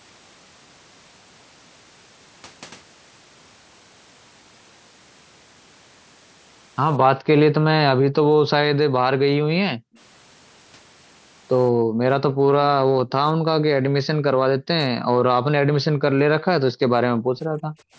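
The room background keeps getting gated by the echo canceller, which is ducking the mic hard while the far end plays. You hear the ambience dip out at 7.15–7.27 s and again at 8.66–9.95 s, where it falls by about 40 dB. Then at 9.95–9.99 s a very faint copy of the sound slips through about 190 ms behind, likely an echo leak where the canceller missed a scrap of loudspeaker pickup. More gating follows at 11.72–12.0 s, 12.3–12.47 s and 12.84–12.99 s, which are shallower dips of about 16 to 24 dB. The long ones are 13.61–16.83 s and 17.03–17.88 s, and there the background drops by about 40 dB for a couple of seconds in total before coming back.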